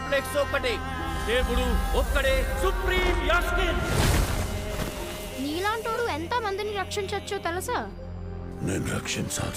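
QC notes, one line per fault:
5.92–5.99 s, corrupt frame decoded: a short burst of misplaced energy lasting roughly 76 ms, which fits about two damaged compressed frames played in succession. Flipped bits in those frames led the decoder to misread gains and spectral codes, so it rebuilt energy at frequencies that do not belong to the surrounding audio. The error peaks at about −20 dBFS before normal decoding resumes.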